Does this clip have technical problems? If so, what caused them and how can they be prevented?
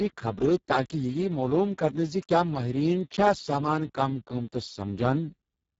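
Yes. The Speex codec damages the speech throughout. The damage is heavy, with hoarse and noisy speech from too few bits for the excitation. That points to a low setting near 6 kbps. Nothing is heard above 7.7 kHz. Encode at a higher Speex quality, or use a modern codec.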